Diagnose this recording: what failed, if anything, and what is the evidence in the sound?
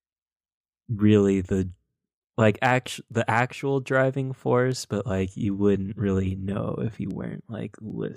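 The failure is at the digital interface between devices: word clock ticks run through the speech from 0.73 s to 7.9 s. About ten sharp ticks of uneven strength repeat at a steady rate of roughly one every 0.7 s. The receiving converter is running on its own clock, a few tens of ppm off the sender's, so each slip misreads a few samples and drops or repeats one. Unlike buffer dropouts, there are no audible gaps, only regular clicks.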